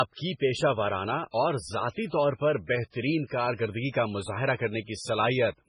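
Speech clip with heavy MP3 compression damage throughout, likely from encoding at a very low bitrate, with a sound that fits around 16 kbps. Nothing is present above 10.5 kHz. Weak spectral lines flicker between frames, giving a watery, swirly texture, metallic chirps on s sounds and smeared attacks.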